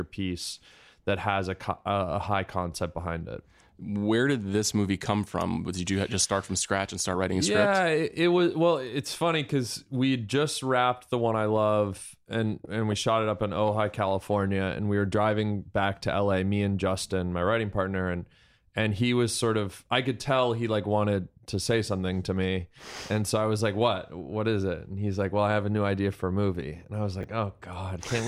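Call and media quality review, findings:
Brief garbled jumble at 27.21–27.24 s, just after "movie and i was". Chunks out of order: one 10 ms chunk played two chunks late, after the audio meant to follow it. Nothing is missing, but the reordering leaves three hard joins. The component is probably the jitter buffer or the playout writer.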